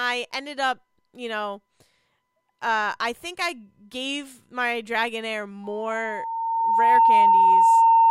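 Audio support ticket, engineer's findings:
Loudspeaker feedback squeal, 5.64 s to end of clip (8.10 s). Single tone near 911 Hz swells over roughly 1.5 s to about 15 dB above the speech. Mic hears its own loudspeaker. Loop gain exceeds one at that frequency. Tone sustains itself.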